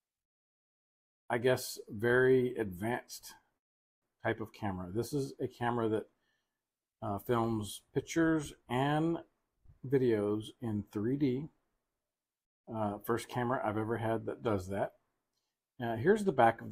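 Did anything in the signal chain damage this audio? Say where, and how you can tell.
Yes. Network stage: delayed packets likely drained the jitter buffer, causing a call audio freeze from 3.57 to 4.04 s. The sound stops for about 0.45 s of near silence, then resumes where it left off.

Jitter buffer stage: a jitter buffer speed-up from 9.26 to 9.65 s trims about a tenth of a second of pitch periods. The sound runs roughly 123% fast at unchanged pitch.

Jitter buffer stage: a short stall from a late packet at 9.66 to 9.70 s stretches the last sound by 20 ms, a brief held sound before playback continues.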